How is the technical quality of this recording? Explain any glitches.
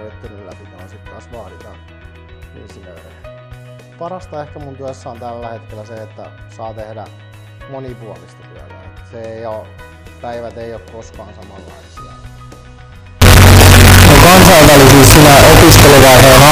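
The recording breaks down near the end. From 13.22 s to 16.51 s there's harsh, very loud distortion, likely signed and unsigned mixed up on 16-bit samples. Each zero crossing jumps across the whole range, so soft and strong passages look equally large in the waveform and the spectrogram floods with broadband energy.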